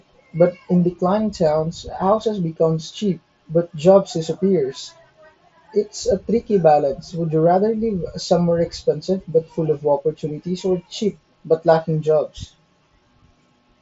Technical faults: none

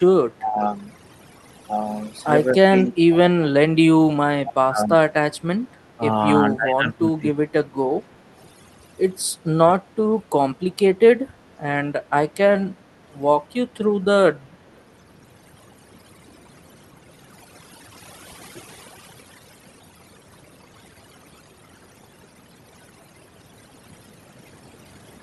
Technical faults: overdone noise removal; speech suppressed in double talk; echo leak

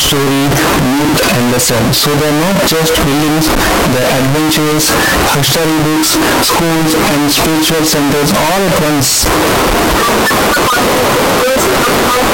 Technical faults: signed and unsigned mixed up

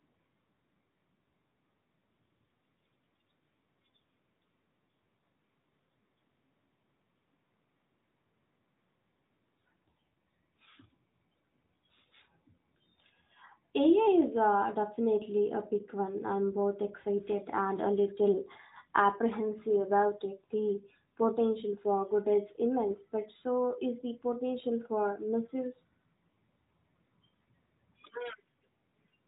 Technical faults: AMR bit errors

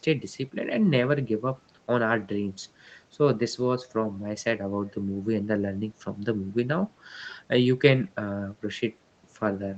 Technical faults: none

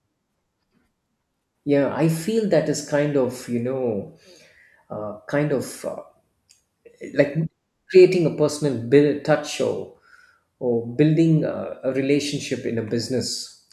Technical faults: none

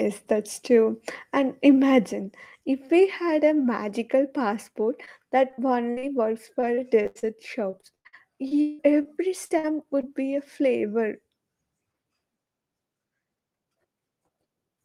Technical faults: microphone volume stepped down; short concealed packet loss; repeated packet loss (robotic sound); burst of packet loss

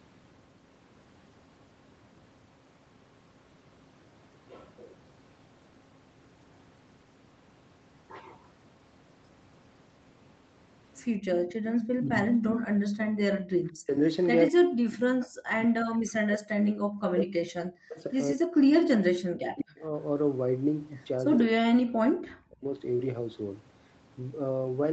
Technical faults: echo leak; background gated by the echo canceller; speech suppressed in double talk

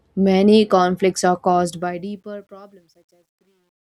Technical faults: truncation distortion on a fade

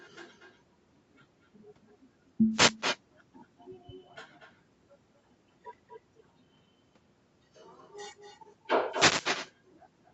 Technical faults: echo with no canceller; wireless microphone noise hit

